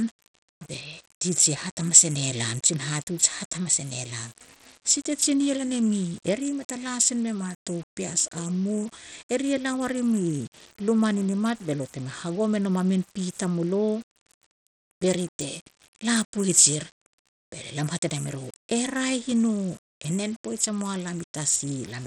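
From start to finish, the speech carries grainy distortion that tracks its level, likely low bit depth without dither, consistent with 8-bit rounding. The waveform shows visible steps and a noise floor only about 25 dB down. Throughout, the treble also flickers and drops out with a gritty, aliased edge, pointing to Bluetooth SBC compression at around 80 kbps. On a spectrogram the upper bands look patchy and switch on and off.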